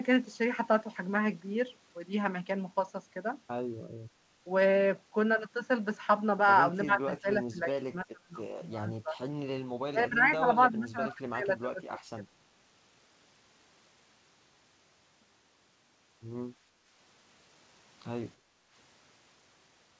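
A speech recording whose voice repeatedly sinks and thins in four stretches, 6.85–8.35 s, 8.78–9.18 s, 9.9–10.48 s and 10.71–12.32 s, dropping by up to roughly 25 dB, most likely speech suppressed in double talk, where the echo canceller mistook the talker for loudspeaker echo. At 18.37–18.71 s the room sound briefly dips by about 9 dB, background gated by the echo canceller while far-end audio played. Through all of it the band stops at 8 kHz, which fits a G.722 call path.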